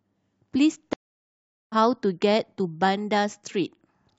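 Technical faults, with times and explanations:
0.93–1.75 s, stream reconnect: the speech drops out for about 0.76 s, then the player reconnects and picks up roughly 0.7 s further along.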